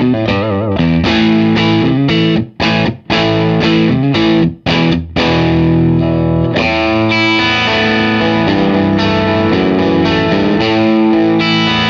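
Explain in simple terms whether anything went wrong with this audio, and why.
Listening to it, nothing stood out as having gone wrong with this audio.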